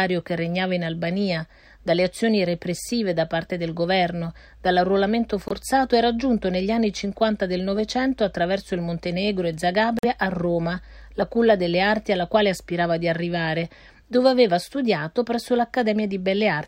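At 5.48–5.52 s and 9.99–10.05 s the sound drops briefly to silence, likely a Bluetooth dropout of late, discarded packets. Each is a flat waveform gap and blank spectrogram band before the sound resumes further on.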